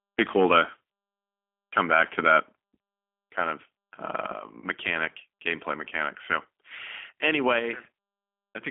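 Throughout, the speech carries G.729 codec damage at 8 kbit/s. The line is band-limited to roughly 250 Hz to 3.4 kHz. The codec rebuilds each 10 ms frame from a filter, a pitch predictor and a few pulses. The result sounds plainly rough and synthetic.

From 1.77 to 2.37 s, the loudest syllables turn harsh and crackly. This is microphone overload. The input was likely set too high, so peaks pushed about 5 dB past the converter's limit. Their tops were sliced flat, and about one percent of samples were clipped.

Right after "kind of uh", from 4.61 to 4.66 s, the speech smears into a short fading sound. This is VoIP packet loss concealed by the speech codec. About 20 ms of audio went missing, which fits two lost 10 ms frames. The decoder extended the last pitch and filter, and the voice stays weak for tens of milliseconds as it recovers.

At 7.59 s, the voice and background drop together in one sudden step of about 5 dB. 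This is a microphone volume step-down. The call software likely reacted to the earlier loud input by cutting the device's input volume all at once.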